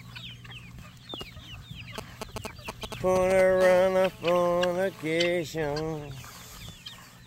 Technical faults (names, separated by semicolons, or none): GSM signalling bursts; GSM phone buzz